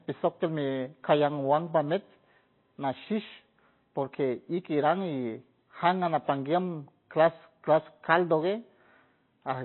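Throughout, the speech is dull, with nothing above 4.1 kHz. Its watery swirl fits likely MP3 compression, starved near 24 kbps.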